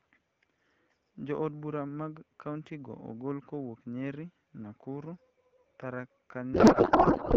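From 6.53 s to the end at 7.37 s, a codec payload misread replaces the speech, which until then is clear AMR-WB consistent with 12.65 kbit/s, with garbled noise and warble. The decoder is parsing frame fields in the wrong positions, which points to octet-aligned AMR frames being read as bandwidth-efficient.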